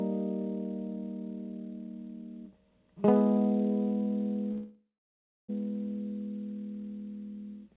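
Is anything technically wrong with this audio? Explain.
Yes, there's a dropout in the music. From 4.52 to 5.51 s you get a call audio freeze: the last bit of sound hangs as a fading buzz or hiss, then about 0.65 s of silence, and the music resumes where it left off, nothing skipped, just running about 0.96 s late. That's likely packets stalling in transit, so the jitter buffer ran dry and the receiver stretched what it had. The band-limiting you hear, with nothing above 4 kHz, comes from the G.711 call codec.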